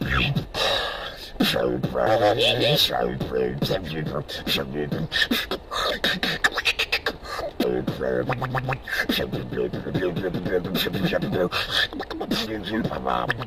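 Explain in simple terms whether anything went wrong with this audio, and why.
Compressed frames skipped at 2.06, 5.90, 7.63 and 12.46 s: the sound jumps ahead briefly.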